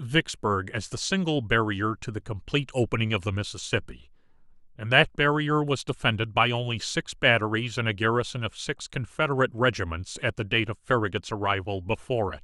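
No technical fault can be heard anywhere in the speech. There are no events to place in time.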